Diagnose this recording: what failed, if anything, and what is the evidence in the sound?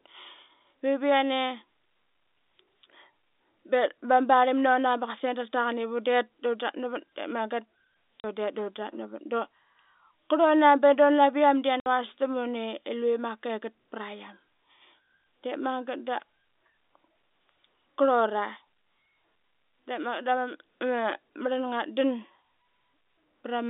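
The failure is in the network stage: packet loss filled with silence. The speech drops out abruptly at 8.2 s for 40 ms and at 11.8 s for 60 ms. Both holes start and stop with hard edges. The gap lengths are whole multiples of 20 ms, which fits lost 20 ms packets. The receiver had nothing to conceal them with and simply played silence. The narrow telephone band of the G.711 coding is audible throughout.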